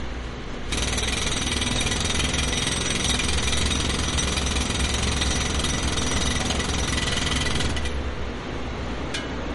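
Throughout, the sound is plainly watery and dull, with nothing above 11.1 kHz, likely from MP3 compression at a low bitrate, consistent with about 48 kbps.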